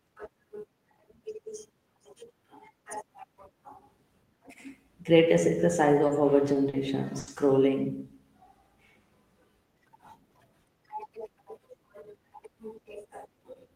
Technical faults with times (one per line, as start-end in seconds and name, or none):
6.07-6.11 short concealed packet loss
6.53-6.75 short concealed packet loss
7.19-7.29 burst of packet loss